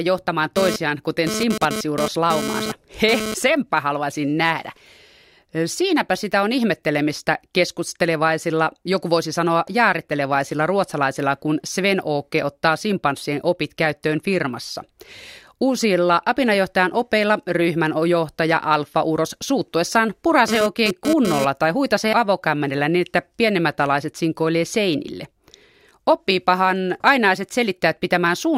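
A nearby 2G handset transmitting data in bursts at 216.7 Hz is being rectified by the audio circuitry, producing GSM phone buzz from 0.56 to 3.34 s and again from 20.48 to 21.45 s: a harsh, harmonic-rich rasp about 5 dB below the speech, unrelated to it.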